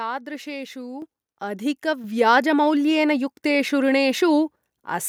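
At 1.02 s and 2.04 s the microphone volume steps up, about 8 dB then 5 dB, lifting speech and background together instantly rather than gradually.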